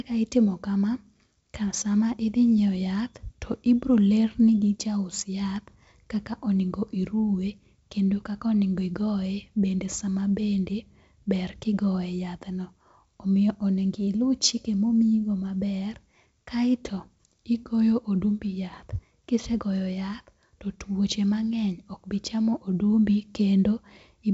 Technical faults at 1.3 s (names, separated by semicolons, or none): none